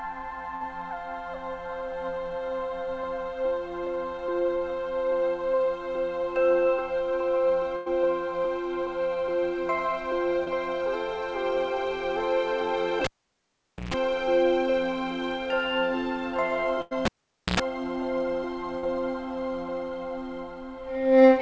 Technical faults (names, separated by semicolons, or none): burst of packet loss; short concealed packet loss; cable pulled and plugged in